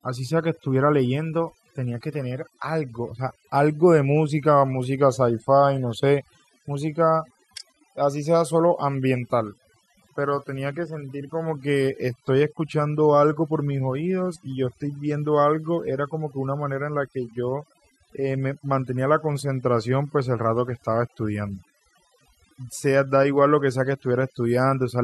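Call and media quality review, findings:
Overdone noise removal, present for the whole clip. Background pulled to near silence with twinkling specks; voice's quiet syllable edges dropping out. Probable component: noise suppressor set too aggressive. Mechanism: bands near its noise estimate gated far down, taking weak speech energy with them. Unlike a low-bitrate codec, there is no swirl on loud passages; the damage sits in quiet bands and pauses.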